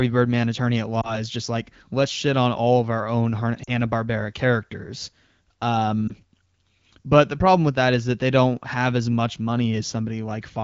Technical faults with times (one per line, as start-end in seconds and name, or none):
1.01-1.22 lost AMR speech frames
3.64-3.70 lost AMR speech frames
6.08-6.14 lost AMR speech frames